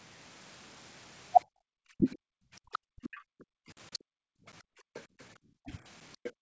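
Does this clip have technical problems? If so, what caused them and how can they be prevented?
Yes. The echo canceller clamped the microphone while the loudspeaker played, so the room background drops by about 40 dB in bursts totalling around 1.5 s between 1.45 and 5.37 s, and again from 6.32 s to the end. Gentler suppression with comfort noise to fill the gaps would keep the background steady.

Speech suppression in double talk was likely caused by the canceller mistaking the talker for echo while both sides spoke. Between 1.96 and 3.02 s the talker's speech dips deeply for roughly a fifth of a second in total, and at 5.65 to 5.70 s it dips more mildly. A canceller with reliable double-talk detection would avoid this.

The other side's voice leaking through likely comes from echo the canceller left behind. That second voice is audible from 2.72 to 3.99 s at roughly 15 dB below the talker, and from 4.94 to 6.32 s at roughly 20 dB below. 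A headset, or a longer and better-converged echo filter, would prevent it.

Packet loss on the ADPCM call left a hard-edged 10 ms hole at 4.52 s, which fits one lost packet. The G.722 decoder's predictor then falls out of step with the sender's, so the speech returns slightly distorted before it settles. Packet-loss concealment that keeps the decoder state in step would smooth this over.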